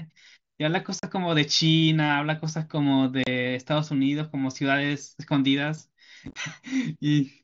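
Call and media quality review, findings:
Unconcealed Bluetooth headset packet loss: hard-edged speech dropouts at 0.99–1.03 s and 3.24–3.27 s, plus a chopped, crackly burst at 6.25–6.36 s. Headset-to-phone voice packets lost, gaps filled with silence or an idle pattern over the mSBC wideband link. Abrupt-edged holes rather than smeared or repeated fill, so no concealment.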